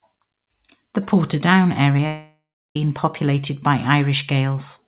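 At 1.86 s and again from 1.97 to 1.99 s, short concealed packet loss leaves brief smears. About 3 ms and then 10 ms of speech were patched from the sound before it, so the flow continues rather than breaking. From 2.06 to 2.76 s the speech stops: a decaying extension of the last sound fades into about a third of a second of silence. It resumes at "populated by" with the missing stretch skipped, not delayed, most likely a long network dropout. Throughout, the sound stays within the 4 kHz telephone band.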